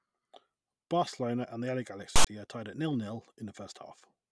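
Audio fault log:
2.16–2.27 s, file tags played as audio: text metadata with zero padding was decoded as samples, giving a hard-edged, lopsided rasp then silence just before "are tied at zero".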